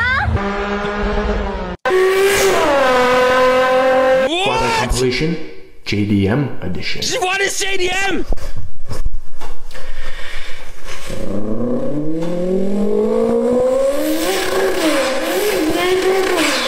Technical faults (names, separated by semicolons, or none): DAB burbling